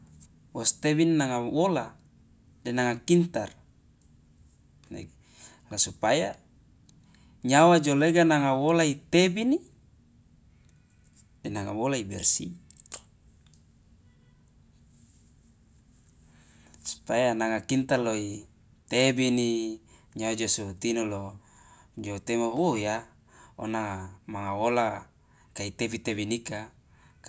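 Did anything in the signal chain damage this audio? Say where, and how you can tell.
No, nothing in the signal chain stood out as damaging this speech on listening.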